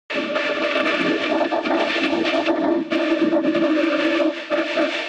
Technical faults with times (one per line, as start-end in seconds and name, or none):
0.00-5.09 hard clipping